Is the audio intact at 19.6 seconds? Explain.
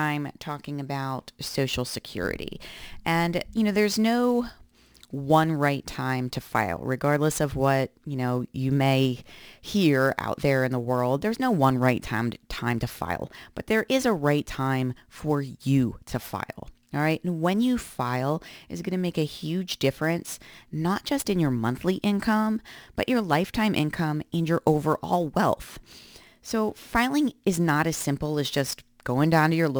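No. Sample clock jitter is present at 19.6 seconds and runs through the whole clip. The converter's clock wavers by roughly 10 microseconds, so each sample lands slightly early or late. Where the speech waveform changes steeply, those timing slips become amplitude errors, here only around 25 dB below the signal. The result is a grainy hiss riding on the speech that grows on louder and brighter sounds and disappears in the pauses.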